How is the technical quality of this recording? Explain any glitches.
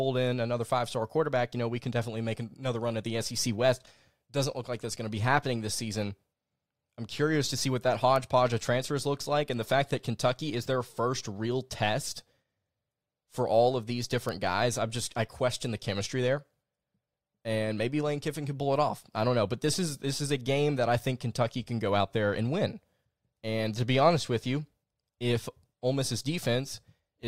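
Two isolated glitches stand out in the speech. At 8.16 s and 14.29 s there is a bit error spike. A single flipped bit makes one sample jump, reaching about -15 dBFS, then return. Each is heard as a sharp, broadband tick unrelated to the speech.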